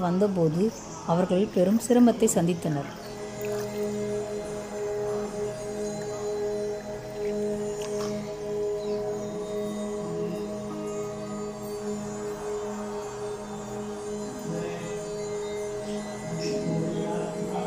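No technical faults are audible.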